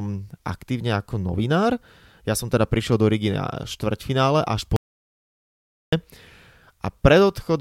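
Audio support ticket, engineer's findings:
Audio dropout to silence, 4.76 s to 5.93 s. Speech cuts off mid-flow, returns abruptly. Gap is silent, no room tone. About 1.16 s of speech lost. Likely input loss upstream, link or device, with the recorder still writing silence.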